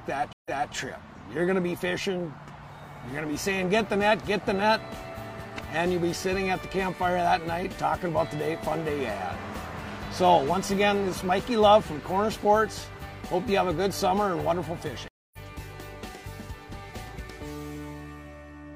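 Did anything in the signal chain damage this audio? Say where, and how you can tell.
Yes. There are two stream reconnects at the network stage. At 0.33 to 0.73 s the sound drops out for 124 ms, then resumes 279 ms earlier and repeats a little. At 15.08 to 15.38 s a 249 ms gap ends roughly a fifth of a second later, skipping material.

At 6.62 s there's one sharp click, a thin vertical line through the spectrum, with nothing audibly missing. That's dropped samples: a tiny fraction of a millisecond vanished, so the waveform jumps straight to a later value. It's likely a driver or buffer hiccup.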